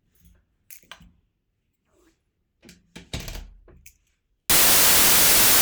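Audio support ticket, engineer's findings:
From 4.50 s to the end at 5.62 s, the audio turns to harsh, loud broadband noise. It's samples built from the wrong bytes. The decoder or reader is likely off by a byte or has the byte order swapped, so the fast-jittering low bits land in the top of each sample.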